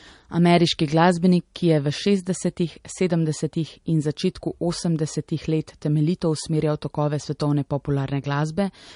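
The speech has nothing above 10.6 kHz throughout. Likely low-bitrate audio saved at a high bitrate: it fits 40 kbit/s MP3 re-encoded at 256 kbit/s.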